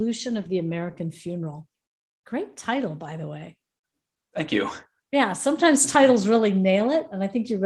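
No faults are audible in this speech; the Opus voice compression keeps the full band and leaves only light coding texture, consistent with a hybrid-mode setting around 24 kbps.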